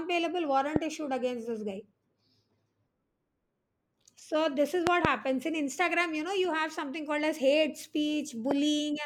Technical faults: loud pop

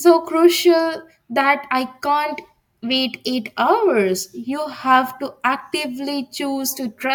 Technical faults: none

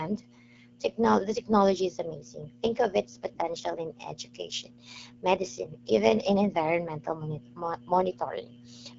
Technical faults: AMR wideband (HD Voice) codec

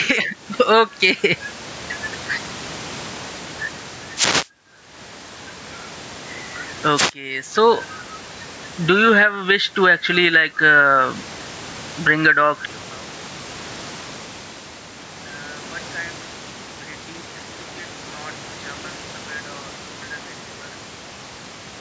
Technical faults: gain pumping; wireless microphone noise hit; one channel inverted

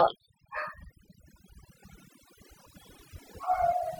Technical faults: overdone noise removal

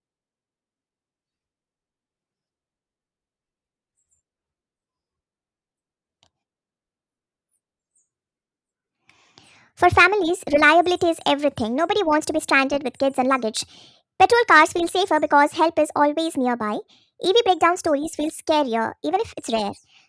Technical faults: wrong sample rate

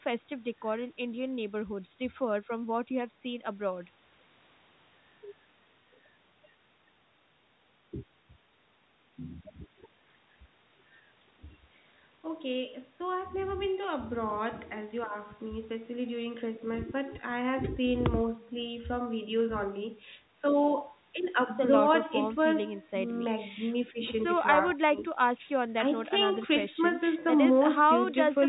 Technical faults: none

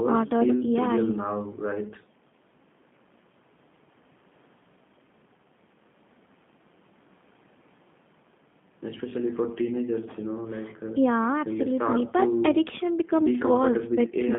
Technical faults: G.729 codec

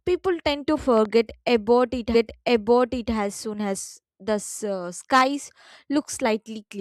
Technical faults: loud pop; stream segment repeated

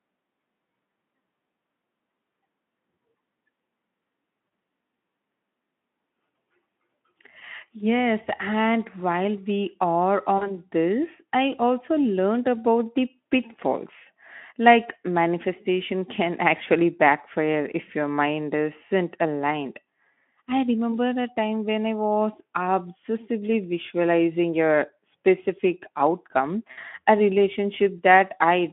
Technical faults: VoIP packet loss concealed by the speech codec

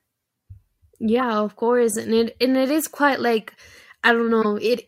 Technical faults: corrupt frame decoded

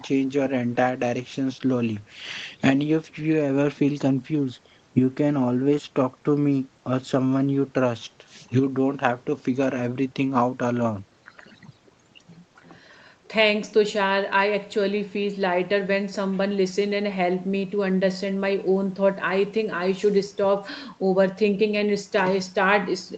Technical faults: none

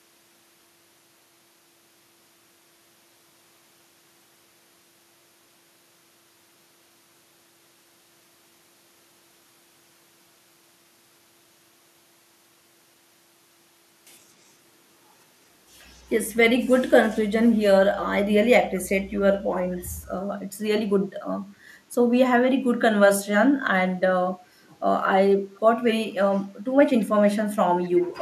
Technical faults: echo leak

